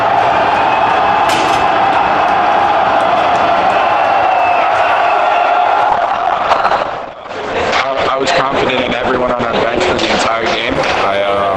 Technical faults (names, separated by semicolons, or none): call bitrate drop